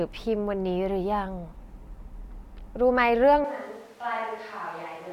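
At 3.45 s the close microphone's feed likely dropped out, and a switch to a distant microphone carries the speech to the end. The voice turns abruptly roomy and hollow, thinner in the bass and about 10 dB quieter, with room noise only some 25 dB below it.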